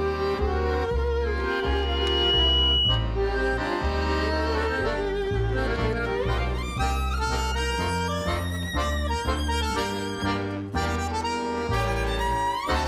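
A loudspeaker feedback squeal runs from 1.5 to 3.15 s. A single 2.9 kHz tone swells within a second to about 5 dB above the audio as the microphone re-amplifies its own loudspeaker. That self-building rise sets it apart from a steady interference whistle.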